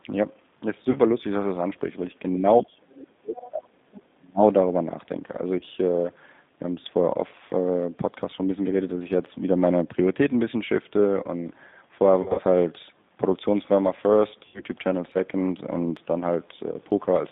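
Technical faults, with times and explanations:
Throughout: G.729 codec. The sound is squeezed into a telephone band of roughly 150 Hz to 3.7 kHz, with nothing bright above it. At 8 kbit/s each 10 ms frame is rebuilt from a vocal-tract filter, a pitch predictor and a few pulses. That gives the plainly audible rough, slightly synthetic texture. It differs from the other faults because it never comes and goes. It colours every moment of the clip evenly.
0.91–0.99 s, 5.59–5.63 s, 12.22–12.42 s, 14.48–14.63 s: VoIP packet loss concealed by the speech codec. The gaps are 40 ms, 20 ms, 120 ms and 60 ms. The 12.22 s event is scattered over 160 ms, with its longest unbroken stretch 60 ms, which fits several lost 20 ms packets. The decoder fills each hole by repeating its last pitch and filter at falling gain, so the sound smears into a brief buzzy tone or coloured noise that fades. The voice stays weak just after the gap.
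2.62–3.71 s and 4.15–4.42 s: speech suppressed in double talk. The speech sinks by about 35 dB over roughly a second, then by about 30 dB over about 0.3 s. The likely cause is an echo canceller that could not tell the talker from loudspeaker echo while both sides spoke, so it turned everything down. These dips last far longer than the packet-loss smears and carry no buzzy fill.
3.01–3.05 s and 3.37–3.49 s: other side's voice leaking through. Short scraps of a second, quieter voice appear inside the suppressed stretch. They sit about 25 dB and about 20 dB below the main speech. Likely residual far-end echo that the canceller failed to remove from the microphone pickup. They are separate fragments of different speech, which sets them apart from the steady codec roughness and the concealment fill.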